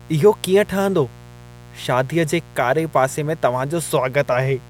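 From start to finish the speech sits on a mains buzz, a steady raspy drone built on 60 Hz. Sharp switching spikes twice per mains cycle, from a dimmer, a rectifier or a missing shield, push harmonics up into the kilohertz range, roughly 25 dB below the voice.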